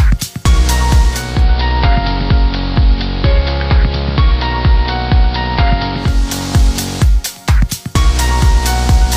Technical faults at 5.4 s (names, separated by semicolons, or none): digital radio blending to analogue